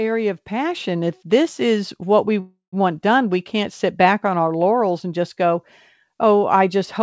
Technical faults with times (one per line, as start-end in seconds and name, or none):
2.40-2.82 call audio freeze